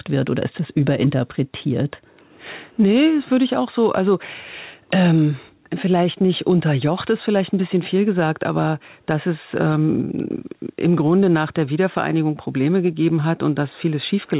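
Gain pumping runs through the whole clip, with the level swinging by roughly 5 dB. The likely cause is microphone gain set far too high, with a fast limiter or compressor clamping it on every loud syllable. That squeezes loud and soft passages together, leaving the speech sounding squashed within a band that stops at 4 kHz, as a 64 kbps G.711 A-law call path would.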